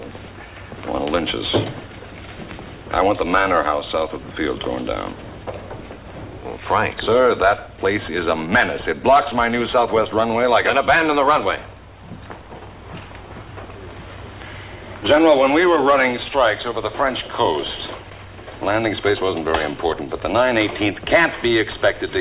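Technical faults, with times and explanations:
No technical faults detected anywhere in the audio.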